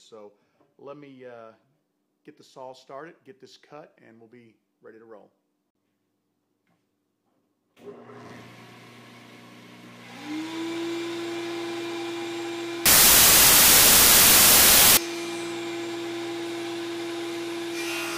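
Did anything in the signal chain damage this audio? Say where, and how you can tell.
Yes: a wrong sample width fault in sample-format conversion, 12.86 to 14.97 s. Packed 24-bit data read as 16-bit gives loud noise, buried sound, 0.667× speed and lowered pitch.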